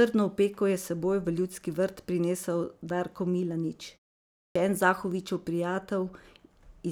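An output device that slept through a 0.55 s pause and needed time to wake causes a clipped start after a pause in this speech: from 4.45 to 4.56 s about 105 ms of the returning sound is lost, so speech begins abruptly without its onset.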